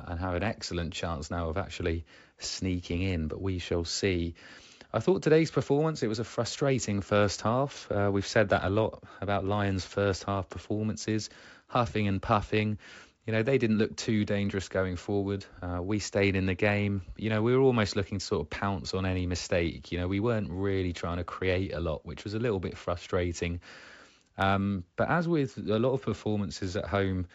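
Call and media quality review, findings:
Nothing to flag on this one: the speech comes through the G.722 wideband path at 64 kbit/s as expected, with no faults heard anywhere in the clip.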